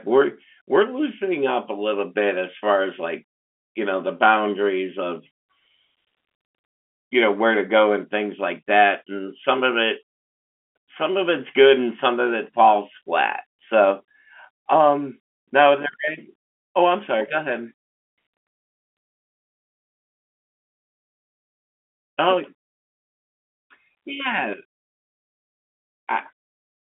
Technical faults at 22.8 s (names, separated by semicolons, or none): none